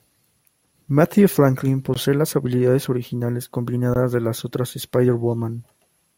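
Right at 1.94 s, just before "las habilidades originales," and again at 3.94 s, just before "de las otras," there's a gap between stream segments: the 2-second segments' timestamps leave roughly 17 ms uncovered, so the player drops in silence, giving hard-edged dropouts with nothing actually lost.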